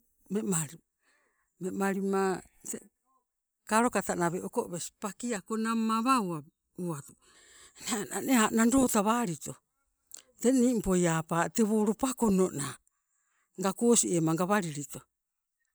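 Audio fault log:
5.37–7.35 s, channel delay (comb filtering): the speech turns hollow and phasey, as fixed notches carve the spectrum from around 700 Hz upward. One channel trails the other by under a millisecond, so the mono sum cancels their shared content at evenly spaced frequencies.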